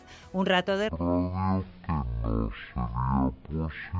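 From 0.89 s to the end, a wrong sample rate drops the sound to about 0.36 times its speed and about 17.6 semitones lower, which fits 44.1 kHz material played at 16 kHz. On a spectrogram, energy crowds into low frequencies and events stretch out; the waveform's envelopes lengthen.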